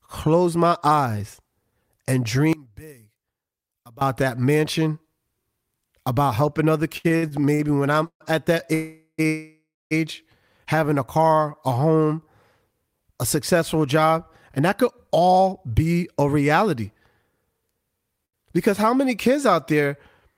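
From 2.53 to 4.01 s the speech drops by about 23 dB, likely because one channel was inverted, so the shared centre cancels when summed to mono.

Between 6.97 and 8.22 s the speech drags and stutters through seven brief holds, the longest 133 ms, about 370 ms in all. These repeated stalls (stutter) come from late packets draining the jitter buffer, and nothing is lost.

At 8.74 to 9.20 s comes a call audio freeze: the last sound is held as a fading buzz or hiss and then silence (70 ms of it), likely from packets delayed in transit. A short stall from a late packet follows at 9.22 to 9.27 s, stretching one sound by 25 ms. Immediately afterward, from 9.27 to 9.93 s, a second freeze holds for 640 ms, including 250 ms of silence, before resuming where it stopped.

From 14.1 to 15.87 s the speech sounds hurried at 105% speed with unchanged pitch. This is a jitter buffer speed-up, which trimmed roughly a tenth of a second of pitch periods to reduce the built-up delay.

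At 18.25 to 18.35 s another short stall from a late packet drags a sound out by 80 ms.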